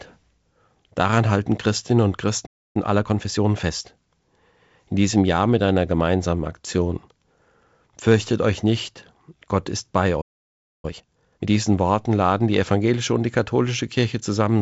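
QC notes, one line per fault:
2.46–2.76 s, playback stall: The speech cuts to silence for about 0.29 s mid-flow. It then resumes. The player likely ran short of data or was blocked.
2.76–3.91 s, time-compressed catch-up: The speech runs hurried at 1.25x. Pitch stays normal. Small pieces are cut out and cross-faded to clear the backlog.
10.21–10.85 s, playback stall: A longer gap of about 0.62 s of silence interrupts the speech. The output simply stops, then picks up again. It was likely starved of data.
10.85–11.47 s, time-compressed catch-up: The speech rushes at 2x to recover the longer delay. Pitch holds, but heavy cutting and cross-fading make the pacing clipped. The G.722 wideband band limit near 7 kHz is audible throughout.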